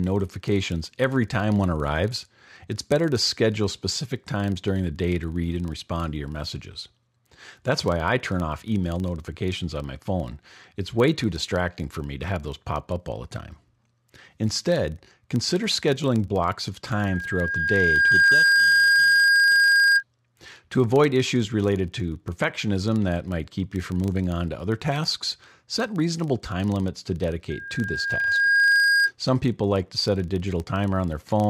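Speech runs throughout with a steady buzz at 25 Hz, the sign of a filter restarted on every block: each 40 ms block begins with a small transient that tracks the speech level, seen as evenly spaced vertical striations on a spectrogram and faint regular spikes in the waveform. A loudspeaker feedback squeal at 1.6 kHz appears after "consider scheduling blocks of", from 16.93 to 20.03 s, and again after "reasonable time limits to", from 27.50 to 29.11 s. Each swells over roughly a second and a half, reaching about 10 dB above the speech the first time and about 5 dB the second, and shows as a bright horizontal line that thickens at 1.6 kHz.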